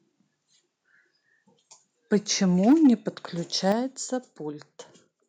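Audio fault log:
2.12–2.16 s, 2.67–2.89 s and 3.69–3.72 s: microphone overload. Loud peaks turn harsh and crackly, up to about 4 dB over. Input gain was likely too high, flattening waveform tops.
2.72 s and 3.72 s: microphone volume stepped down. Sound and background drop suddenly, by about 2 dB, then about 6 dB. Call software likely cut input gain after clipping.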